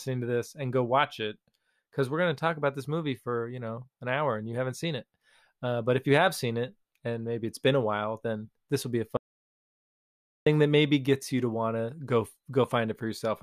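A speech clip in which the sound cuts off abruptly at 9.17 s, right after "this will be a", and stays in dead digital silence, with no room tone at all, until 10.46 s, when it returns mid-flow on "that maybe gets you". This is an audio dropout to silence lasting about 1.3 s, and whatever was said in that span is lost. The likely cause is a momentary loss of the input signal, such as a disconnect or mute, while recording continued writing zeros.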